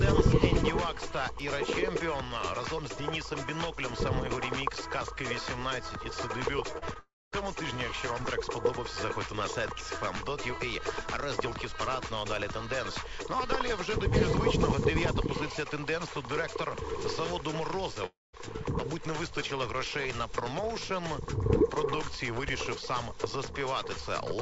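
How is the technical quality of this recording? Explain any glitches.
The recording has audible gaps from network loss around 7 s and again near 18 s. The audio has nothing above 8 kHz, which fits a wideband call codec such as G.722 at 64 kbps.

Short concealed packet loss occurs at 6.78 to 6.84 s and 6.94 to 6.97 s. Missing packets were patched by extending the previous sound, giving brief smears or wobbles.

A long network dropout is the likely cause of the gaps at 6.99 to 7.34 s and 18.06 to 18.35 s. The sound trails off into a fading buzz or hiss, then goes silent for about 0.24 s and 0.2 s, before resuming with material lost.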